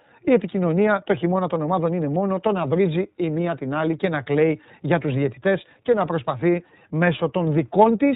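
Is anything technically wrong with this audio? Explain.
Yes. The iLBC codec is plainly audible throughout the speech. It passes nothing above 4 kHz and codes each frame's excitation separately, which fits 30 ms frames near 13 kbps, so voicing turns rough and synthetic. A plain low-pass filter would dull the sound without that grainy texture.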